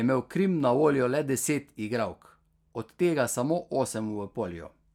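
Nothing stood out on listening to this speech recording.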